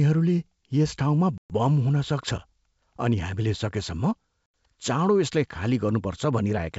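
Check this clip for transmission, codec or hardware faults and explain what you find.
Two dropouts are audible, both packet loss on an ADPCM call. The speech cuts abruptly to silence from 1.38 to 1.51 s, a gap of about 120 ms, and again from 4.46 to 4.54 s for about 80 ms. Each gap matches several consecutive lost packets. When the speech resumes, it comes back with brief, slight distortion. That happens because the receiving decoder's adaptive predictor and step size no longer track the sender's. They realign within some tens of milliseconds. Outside the gaps, the G.722 wideband coding carries the speech cleanly.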